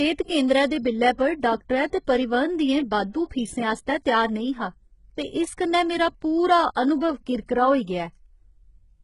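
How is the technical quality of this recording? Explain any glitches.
Heavy compression damage runs through the whole recording. It sounds like likely HE-AAC compression. Nothing is present above 11.1 kHz. The damage is heavy, which fits a very low bitrate around 12 kbps. At that rate, the codec keeps only the lower spectrum. It fakes the treble by copying lower bands upward under a coarse envelope. The rebuilt highs do not match the real harmonics, so s sounds come out gritty, metallic and lispy.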